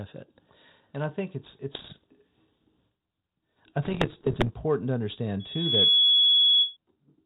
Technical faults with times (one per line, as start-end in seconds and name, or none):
1.74-2.04 bit errors on an ADPCM link
3.82-4.50 bit errors on an ADPCM link
5.39-6.77 loudspeaker feedback squeal